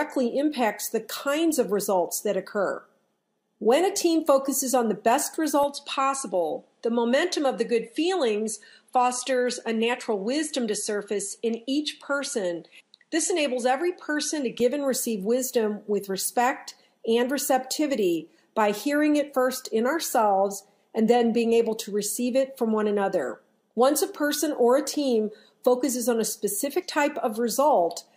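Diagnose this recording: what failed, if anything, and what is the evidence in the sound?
From 5.63 s to 14.60 s the sound turns duller, with nothing above 11.4 kHz, a faint new noise floor roughly 50 dB down, and no gap or level jump at either edge. The likely cause is an input switched to a poorer device at the driver stage, whose narrower band and own noise replace the original microphone's.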